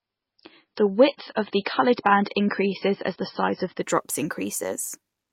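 Until 3.83 s the speech cuts off above 5.6 kHz and smears. It is an adaptive stream starting at a low bitrate, then jumping seamlessly to higher quality.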